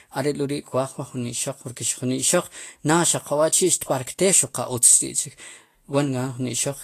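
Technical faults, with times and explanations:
Throughout, Vorbis compression: nothing is heard above 14.2 kHz, and the remaining treble in the speech sounds hissy and grainy, likely because the codec quantised that band so coarsely that fine detail became noise, which fits a low bitrate near 34 kbps.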